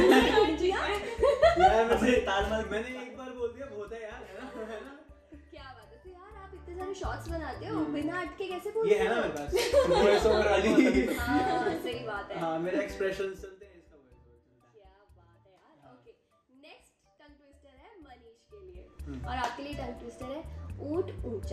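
A quick ticking, like a zip being pulled, rides on the sound while the level shifts at 6.32 to 6.87 s (a rise of roughly 15 dB), 13.19 to 13.65 s (a drop of about 20 dB) and 18.48 to 19.13 s (a rise of about 20 dB). This is zipper noise. Each gain move is applied in bare 2 dB jumps, around fifteen to twenty per second, with no smoothing, so every jump leaves its own small click.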